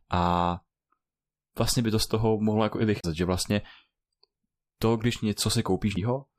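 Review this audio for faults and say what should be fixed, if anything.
Damaged data in the compressed stream gives two brief glitches. The first is at 2.99 to 3.05 s, between "toho mohlo jako i" and "že vlastně". The second is at 5.93 to 5.97 s. Corrupted bytes throw the decoder off frame sync. Verify checksums on transfer and re-encode from a clean source.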